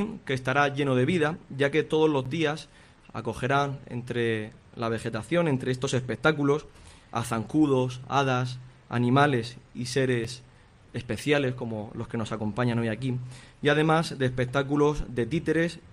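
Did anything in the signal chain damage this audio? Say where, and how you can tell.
Yes. The damage sits at the network stage between sender and receiver, with two short dropouts further down at the driver or buffer stage.

Clock drift between sender and receiver runs through the whole clip. The sender's sample clock is running roughly 4 percent fast relative to the receiver's. Audio therefore arrives slightly quicker than the receiver plays it out, and its jitter buffer keeps creeping toward overflow. Small timing hiccups recur at uneven intervals from start to finish rather than at any single point, which is how this fault presents.

Repeated timing corrections are the receiver's response to that drift, running from 0.02 s to 15.59 s. To keep the buffer from overflowing, it keeps trimming short slices out of the stream, all in the same direction, adding up to a playback rate of 104 percent. 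The cuts come at uneven intervals and each is small, so if they register at all it is as slight hiccups and an uneven pace rather than as obvious edits.

A block of digital silence occurs at 2.25 s and again at 10.24 s. The first hole lasts 8.7 ms and the second 2.9 ms. The second length fits a 128-sample buffer. In each case the output drops straight to silence and comes straight back with no fade, and being so short, each reads as a tick. This most likely points to a buffer that was not filled in time.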